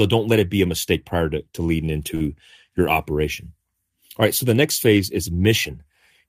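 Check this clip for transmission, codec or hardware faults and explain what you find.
One transmission fault. At 2.15 to 2.22 s, between "prior to to leading" and "your operation", a sound is held slightly too long with a faint buzz or dip: a short stall from a late packet. The jitter buffer ran dry, so the receiver stretched about 50 ms of sound until the packet arrived, then resumed with nothing lost.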